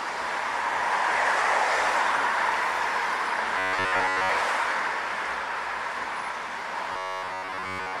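From 3.58 to 4.30 s, and again from 6.93 s to the end, the sound turns into a rigid, metallic buzz near 94 Hz. This is robotic sound from repeated short buffers. A roughly 10.7 ms slice is likely being replayed while most real audio is skipped.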